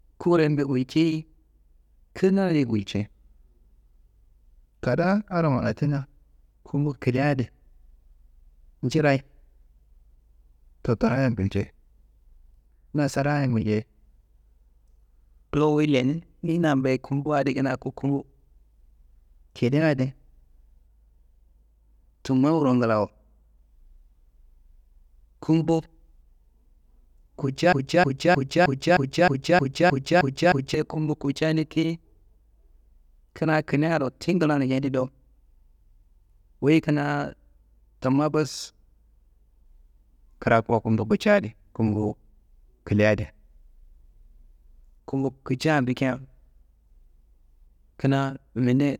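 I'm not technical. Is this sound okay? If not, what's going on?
No. From 27.73 to 30.74 seconds the speech gets stuck in a broken-record loop: one short snippet, about 0.31 seconds long, plays ten times in a row. The likely cause is the playback or stream stalling and resending its last piece, so the speech meant for those three seconds is missing.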